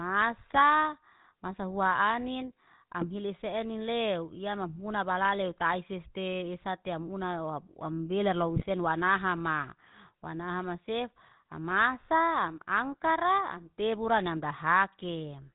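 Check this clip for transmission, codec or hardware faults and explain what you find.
Two problems show up: GSM full-rate coding across the whole speech clip, plus three short bursts of GSM bit errors.

The GSM full-rate codec runs throughout. It rebuilds the voice from a vocal-tract model and coarse pulse excitation, which gives the buzzy, gravelly roughness and nothing above 4 kHz. That fits the 13 kbps codec.

GSM bit errors hit at 0.50–0.58 s, at 3.01–3.06 s between "hua anin" and "hili senin lew ya", and at 8.56–8.64 s between "wamubelar lau" and "sen wanahama". Corrupted filter, pitch or gain values throw a few frames off, so you get brief squawks, pops and gargling.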